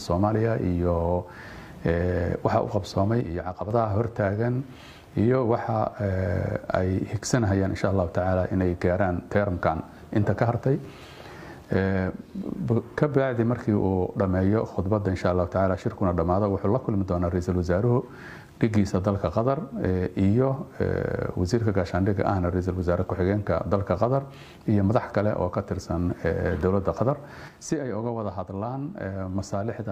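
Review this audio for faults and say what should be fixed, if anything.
One channel drops out at 3.21–3.71 s and again from 27.48 s to the end: the level falls abruptly by about 6 dB, likely because one stereo side was lost before the mono sum. To prevent it, secure the cabling and connectors on both input channels and check each side's signal before downmixing.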